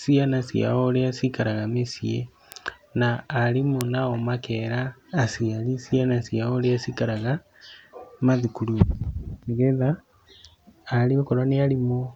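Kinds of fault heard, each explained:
Bit error spike: a single flipped bit briefly jumps the sample value, giving sharp broadband ticks at 2.52 s, before "na arimũ nao makera", peaking near about -10 dBFS, and 3.81 s, peaking near about -4 dBFS.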